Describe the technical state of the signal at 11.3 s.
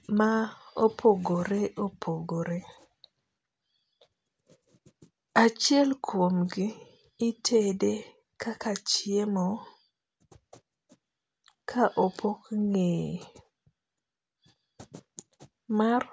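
At 11.3 s the speech signal is intact, with no technical fault present at that moment.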